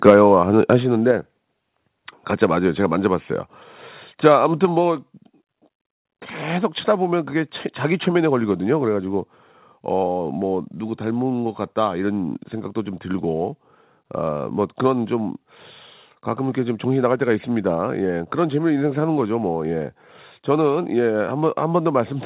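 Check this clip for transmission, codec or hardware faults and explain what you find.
Two hardware-side faults are audible, both at the microphone input, while the audio passes through a call path whose band ends at 4 kHz, which fits G.711 mu-law at 64 kbps.

Microphone overload, 0.06 to 0.34 s: the opening speech peaks run about 6 dB past the converter's limit, most likely because the input volume was set too high. A small fraction of samples are flattened at the converter's ceiling, giving those syllables a harsh, crackly grit.

Microphone volume stepped down, at 0.1, 1.11 and 4.65 s: the input level drops abruptly by about 3 dB, then about 4 dB, then about 4 dB again. The call software is likely reacting to the overloaded peaks by cutting device gain in single steps. Speech and background sink together at each point.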